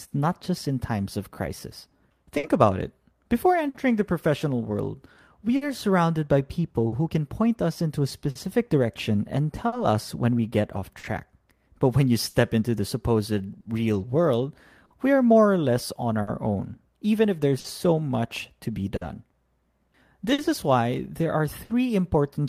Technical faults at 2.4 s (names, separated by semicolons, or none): clock drift between sender and receiver; repeated timing corrections; short stall from a late packet